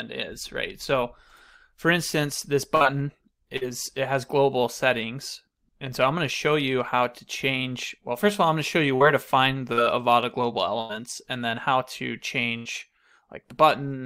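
The audio has repeated bursts of packet loss at 2.75–2.84, 3.57–3.64, 8.96–9.03, 10.81–10.92 and 12.57–12.68 s, each heard as a held buzz or fading hiss. A chunk of sound is skipped afterwards: about 40 ms in the first three and 80 ms in the last two. At 9.73–9.80 s a short concealed packet loss of about 40 ms gives only a brief smear that blends back.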